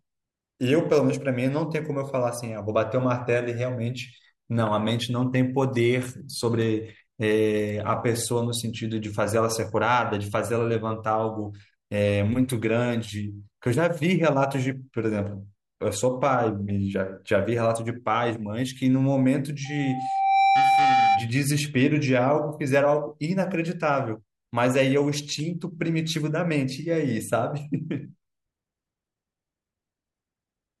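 At 19.65 s a loudspeaker feedback squeal begins: the microphone picks up its own loudspeaker, and at 783 Hz the loop gain exceeds unity. The tone swells over a little under a second to about 5 dB above the speech, then stops at 21.30 s.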